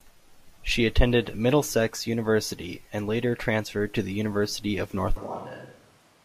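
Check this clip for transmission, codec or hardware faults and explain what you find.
One fault, in the last second of the clip. From 5.18 s to the end, the speech abruptly turns roomy and hollow, with thinner bass. It drops about 5 dB in level, and background noise rises to roughly 25 dB below the speech. The sudden change points to a switch to a distant microphone, likely because the close microphone's feed dropped out and a farther pickup took over. That pickup captures more room reflections and ambient noise relative to the talker.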